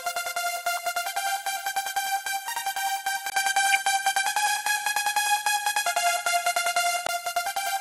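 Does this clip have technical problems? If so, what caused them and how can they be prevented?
Yes. Throughout, the audio sounds dull and plainly gurgling, with a grainy texture on anything bright and upper detail that seems to flicker in and out. This is MP2 compression, likely at a rate around 80 kbps. MPEG Layer II divides the spectrum into 32 sub-bands and shares out bits between them. At this rate there are too few bits, so the top bands drop out intermittently and the rest are quantised coarsely. Encoding at a higher bitrate, or with a more efficient codec, would prevent this.

Short bursts of burbling cut across the sound at 0.75 to 0.79 s, 3.65 to 3.75 s and 6.66 to 6.74 s, each lasting a few frames. This is DAB burbling. The bursts fit a small fraction of a percent of bit errors getting past error correction into the MP2 stream, so corrupted samples put short blips of noise into single sub-bands and corrupted scale factors make sub-bands jump in level for up to a frame. 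Better reception, through a stronger signal or a better-placed antenna, would prevent it.

At 3.30 s there is a gap of about 20 ms, and then the sound turns duller and shifts in level by about 5 dB. Nothing above 12 kHz comes through, and a faint new noise floor sits well below the signal. At 7.09 s the fuller sound returns. This is an input switched to a poorer device, likely a change of microphone or a headset call profile taking over the input, which brings a narrower band and its own noise. Locking the input device before recording would prevent it.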